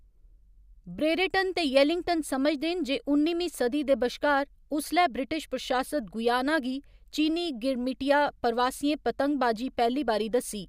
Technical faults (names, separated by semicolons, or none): none